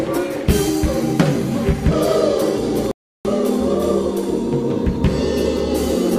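At 2.91 s the audio drops into silence until 3.25 s, a rebuffering stall. The player ran dry of downloaded data and simply waited for more, so the sound picks up exactly where it left off. Nothing's missing, but about 336 ms of dead air gets added.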